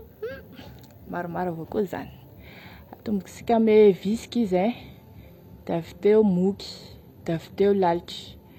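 Speech, and at 3.27 s the quality drops abruptly with no gap. From there to the end, nothing comes through above about 14.9 kHz, and the top sounds thinner. That's an adaptive stream switching to a lower bitrate, which fits a step from high-rate AAC down to something like 24 kbit/s HE-AAC.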